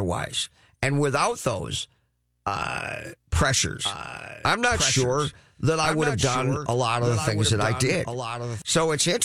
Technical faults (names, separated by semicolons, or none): doubled audio track